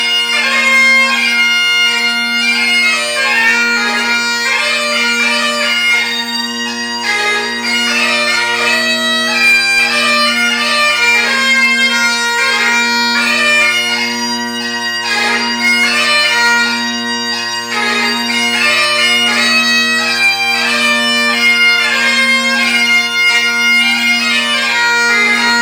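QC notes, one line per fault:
Throughout: hard clipping. The signal is driven about 6 dB past what one stage can pass, so the loudest peaks are sliced flat. Around one percent of samples are cut. Those flat tops add high harmonics, heard as brief crackle on each loud peak.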